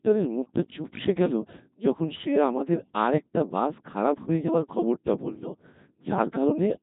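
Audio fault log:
throughout, Codec 2 vocoder: the speech was reduced to pitch, voicing, energy and spectral envelope, which fits a 2.4 kbit/s mode, and was then resynthesised from sine waves. This leaves a heavily robotic, buzzy sound with nothing above 3.8 kHz.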